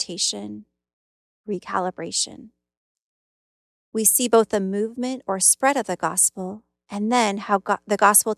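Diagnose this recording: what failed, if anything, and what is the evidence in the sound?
Nothing failed in this recording, and the sound gives no evidence of any fault.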